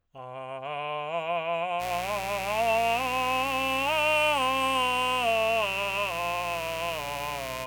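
From 1.78 s to the end there's mains buzz: 60 Hz switching spikes leaking in, a raspy hum only about 10 dB under the music.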